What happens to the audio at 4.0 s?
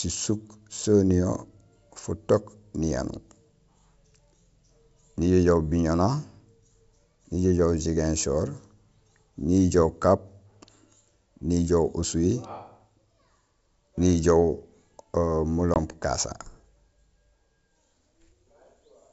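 Nothing goes wrong at 4.0 s: the speech passes through intact at that moment, carried by G.722 wideband telephone coding at 64 kbit/s with at most faint coding damage.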